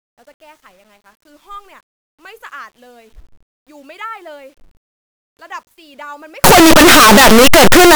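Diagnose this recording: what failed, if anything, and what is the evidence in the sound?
Sample-format conversion likely mixed up signed and unsigned samples from 6.44 s to 7.95 s, flipping the top bit of each 8-bit sample. Every zero crossing jumps across the full range, so the speech becomes loud, harsh distortion, its quiet moments as loud as the rest.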